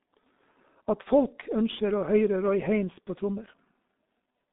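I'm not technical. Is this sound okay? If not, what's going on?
No. G.723.1 codec damage runs through the whole clip, from start to finish. This is an old internet-phone codec that squeezes speech into very little data. It keeps only the band from 200 Hz to 3.7 kHz, with nothing at all above 3.8 kHz, so the speech sounds muffled and boxed-in. It also rebuilds the voice in coarse, slow steps, and here that damage is heavy, making the speech hoarse and the consonants smeared.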